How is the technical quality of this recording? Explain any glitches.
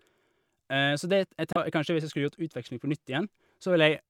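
One glitch mars the speech. From 1.53 to 1.57 s there is damaged data in a compressed stream: corrupted bytes make the decoder misread frames and lose sync until it finds a valid header. The result is a brief chirp, squawk, click or short hole.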